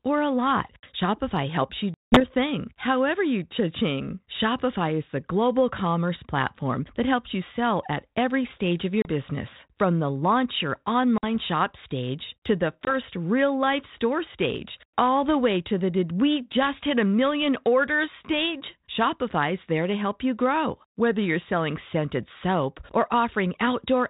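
Packet loss on an ADPCM call hits at 1.94 s (180 ms lost), 9.02 s after "every stage of your", 11.18 s and 12.85 s. Each gap is a hard-edged silence, and the decoder's predictor and step size, now out of step with the sender's, bring the speech back slightly distorted until they resettle.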